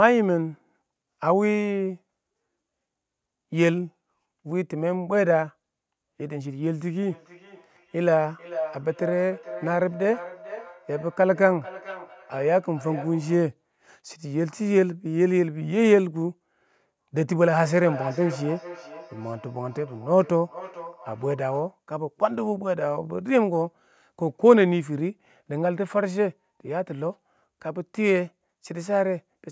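Feedback echo between two devices, 7.07 to 13.5 s and 17.52 to 21.74 s: another device replays the call into this microphone, so speech returns roughly every 0.4 s, about 14 dB below the direct speech.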